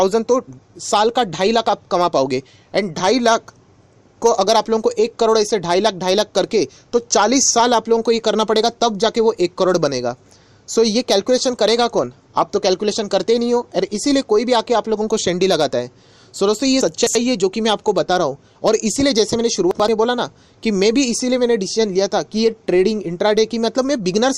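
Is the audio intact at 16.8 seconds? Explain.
No. From 16.81 to 17.15 s the audio has chunks out of order: one block about 85 ms long arrived or was written three chunks late, so it plays after the three blocks that should follow it. No material is missing, but the sequence is scrambled, giving a brief jumbled, garbled moment with three hard joins. On a spectrogram, thin vertical broadband lines mark those joins and the contours jump out of sequence. The waveform shows abrupt steps there.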